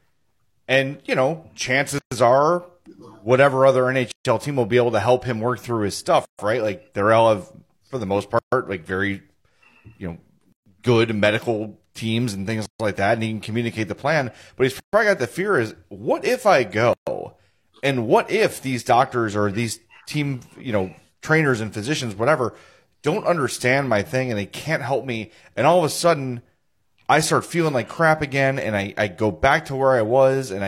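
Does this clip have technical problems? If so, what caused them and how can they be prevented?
Yes. Gaps at joins of encoded pieces open at 1.98, 4.12, 6.25, 8.39, 10.52, 12.66, 14.80 and 16.93 s. Each is a silence of about 131 to 136 ms with smeared edges, after which the speech resumes where it stopped. The pieces, each about 2 s long, were encoded separately, and each one's leading encoder delay and padded final frame were kept when they were joined. To prevent this, trim each piece's encoder delay and padding before joining, or encode the whole recording in a single pass.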